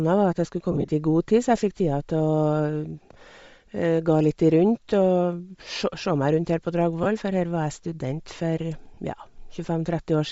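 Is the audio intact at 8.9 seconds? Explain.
No. From 8.94 to 8.97 s the speech briefly drops out and is patched over. Those are lost LE Audio frames: about 30 ms, which fits four 7.5 ms frames, that the decoder concealed by reusing the last spectrum with random signs. Around that moment the speech also has a plainly audible breathy, grainy edge, likely from Bluetooth LC3 compression at 32 kbps, which thins the upper spectrum and fills it with noise.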